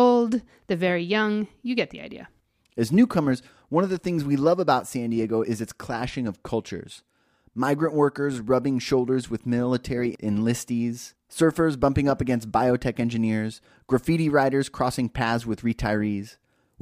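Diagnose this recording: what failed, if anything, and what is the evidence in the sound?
No audible fault detected.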